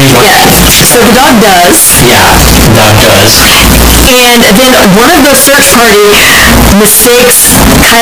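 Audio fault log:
throughout, float read as integer: the speech becomes a loud, harsh, nearly square wave at an almost fixed, high level, with background noise as loud as the speech, though pitch stays traceable. The likely cause is 32-bit float samples read as 32-bit integers, so sign and exponent bits set each level.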